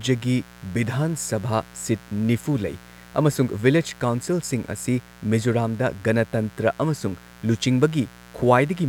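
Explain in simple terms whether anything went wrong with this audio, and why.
Mains buzz runs through the whole clip: electrical interference from the 60 Hz power supply leaks in as sharp spikes, adding a steady, raspy buzz under the speech.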